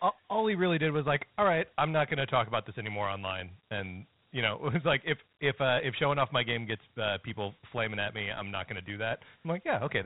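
A speech clip carrying Dialogic VOX ADPCM damage from start to finish. The 4-bit adaptive step coding, at a rate that fits 32 kbps at 8,000 samples a second, leaves a gritty hiss riding on the speech, plainly audible. The spectrogram shows a hard ceiling with nothing above 3.9 kHz, and a grainy noise floor filling the gaps between harmonics wherever the speech is loud.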